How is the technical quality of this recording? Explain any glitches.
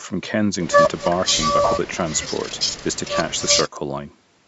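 The technical quality of this recording shows no glitches to explain, with the speech carried through ordinary call microphone processing that trims the lowest bass.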